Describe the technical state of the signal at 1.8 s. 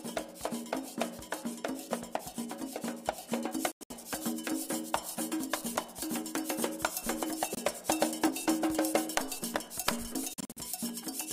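At 1.8 s the signal is intact, with no audible fault at that moment.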